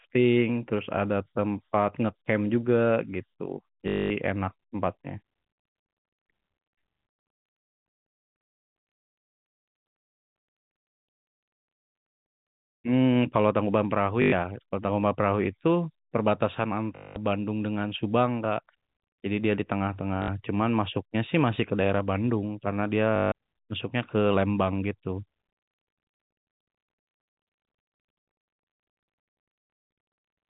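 Packet loss with the last packet repeated strikes at 3.88, 14.22, 16.96, 20.22 and 23.16 s. The gaps last 220, 100, 200, 60 and 160 ms. Each gap is filled by replaying the last packet. Longer runs buzz near 50 Hz, which fits 20 ms packets. It sounds like a robotic stutter.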